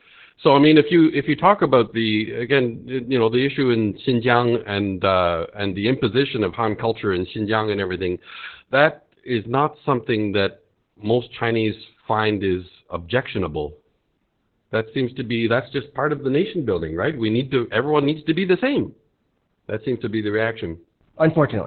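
Opus voice compression affects the whole clip. Nothing remains above 4.4 kHz. Speech sounds muffled, hoarse and robotic, which fits narrowband SILK coding near 8 kbps.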